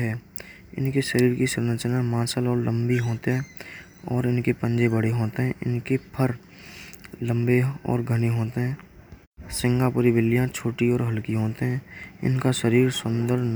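No technical faults can be heard in this recording.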